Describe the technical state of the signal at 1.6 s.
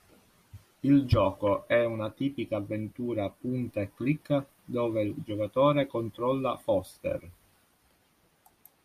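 At 1.6 s the speech signal is intact, with no audible technical fault at that moment.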